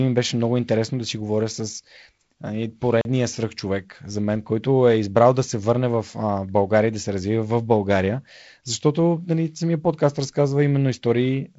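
At 3.01 s a block of samples was replaced by zeros, leaving a block of digital silence of 38 ms that ends at 3.05 s. The signal drops straight to zero and returns with no fade, so the speech is cut by a brief hole, heard through G.722 wideband telephone coding that carries nothing above 7.7 kHz.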